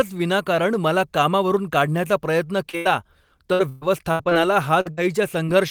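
Short concealed packet loss first appears at 2.69 to 2.75 s, just after "मला कामावरून काढण्याचा प्रयत्न". About 40 ms of the stream failed to arrive in time. The decoder bridged roughly 35 ms of it by extending the preceding sound before blending back into the real signal, which leaves a brief smear in the speech.

A burst of packet loss follows almost at once, from 2.77 to 2.87 s. About 80 ms went missing in one run. The receiver held the last sound and let it decay across the hole, so a sustained buzz or fading hiss stands in for the lost audio. Speech then resumes further along, with that stretch gone.

Repeated packet loss, heard as robotic sound, runs from 3.53 to 4.33 s. Five separate gaps, the longest 124 ms, remove about 300 ms of audio. Each one is patched by continuing the previous sound, and the next dropout arrives before the speech settles. Roughly a third of the span is synthetic fill, so this stretch sounds choppy and mechanical, with fragments missing.

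Short concealed packet loss returns at 4.81 to 4.87 s, where about 40 ms is filled. A second burst of packet loss at 4.91 to 4.99 s drops about 60 ms, which is bridged by a decaying extension of the prior sound. A final short concealed loss at 5.45 to 5.49 s covers about 20 ms and gives a brief smear or wobble.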